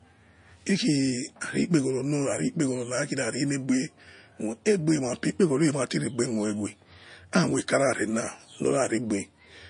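MP3 compression, throughout: the speech sounds watery and swirly with dulled treble, likely a bit-starved encoder, consistent with roughly 40 kbps, cutting highs and flickering weak frequency components.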